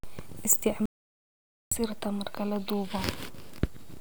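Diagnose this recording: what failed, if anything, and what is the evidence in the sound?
The speech cuts off abruptly at 0.86 s and returns mid-flow at 1.71 s. For about 0.86 s in between there is silence, with no room tone, hiss or decay tail, so whatever was said in that stretch is simply missing. This is an audio dropout to silence at the capture stage. The likely cause is a momentary loss of the input signal, such as a device or link interruption or a brief mute, while the recorder kept writing silence.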